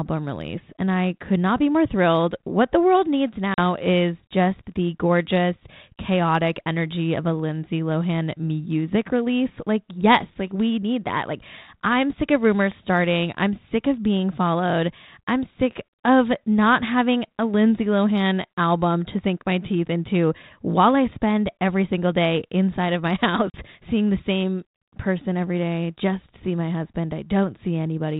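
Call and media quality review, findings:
Packet loss on an ADPCM call: 40 ms silent holes at 3.54 s (after "the world needs") and 23.51 s (before "seeing the same person"), about two packets each. Unlike plain dropouts, each resumes slightly distorted while the G.726 predictor resyncs.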